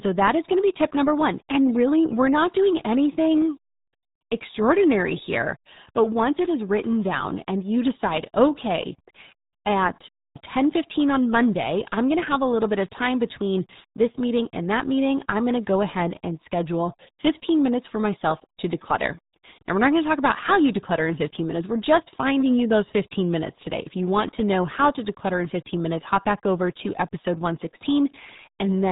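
From start to finish the speech sounds muffled and gargly, with nothing above 3.8 kHz. This is heavy damage from the RealAudio 14.4 codec, RealAudio 1, squeezing the sound to a rate that fits an 8 kbit/s dial-up stream.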